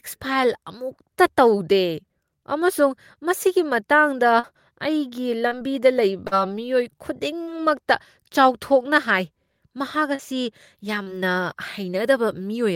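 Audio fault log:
4.39–4.46 s (after "ꯑꯃꯁꯨꯡ ꯃꯁꯤꯒꯤ ꯃꯇꯥꯡꯗ"), 5.47–5.54 s (after "ꯑꯃꯁꯨꯡ ꯃꯁꯤꯒꯤ ꯃꯇꯥꯡꯗ ꯑꯩꯒꯤ"), 6.27–6.34 s, 7.43–7.50 s, 10.15–10.22 s, 11.03–11.09 s: short concealed packet loss. Each time 40 ms of speech failed to arrive and the decoder extended the preceding sound for 36 to 42 ms before rejoining the real audio, heard as a brief smear or wobble.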